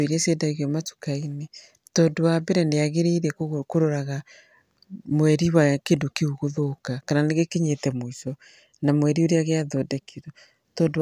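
No technical faults can be heard anywhere in this speech recording. There is nothing in it to mark with a time or to describe.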